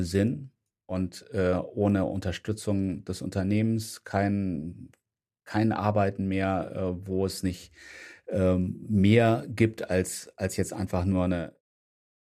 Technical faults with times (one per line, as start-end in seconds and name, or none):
none